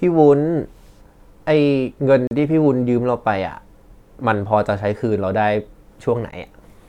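At 2.27 to 2.31 s the speech drops into a hard-edged hole of silence, about 37 ms long. A second, shorter hole of about 14 ms falls at 6.31 s. Both are gaps between stream segments. The 2 s segments were stamped with time missing between them, so the player filled that time with silence. Nothing was lost.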